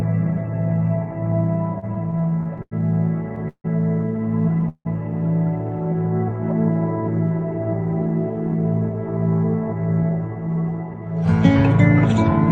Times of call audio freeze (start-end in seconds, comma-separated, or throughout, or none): 3.48-3.66, 4.69-4.87